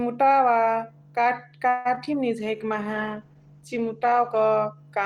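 From 1.69 to 2.15 s, the speech breaks up with repeated packet loss, heard as robotic sound. Four gaps fall close together. Each is patched by stretching the previous sound, the longest about 157 ms. About 60 ms is simply missing. The result is choppy.

From 2.41 to 4.50 s, a call bitrate drop makes the speech rough and muffled. The encoder had fewer bits and coded more coarsely, trimming the highs. This fits a fall from 40 to 15 kbps, held at its lowest for about two seconds.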